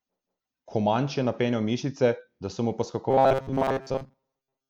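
After "mišice da so mu", at 3.1 s, robotic sound from repeated short buffers takes over to the end. Speech becomes a metallic 134 Hz buzz, likely from looping 7.5 ms chunks.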